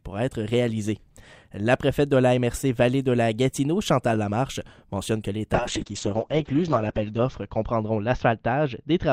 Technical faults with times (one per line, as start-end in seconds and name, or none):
5.55-9.12 call bitrate drop